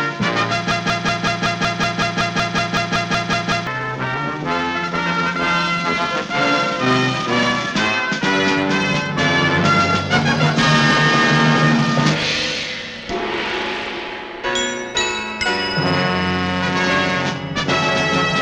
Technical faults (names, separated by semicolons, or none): broken-record loop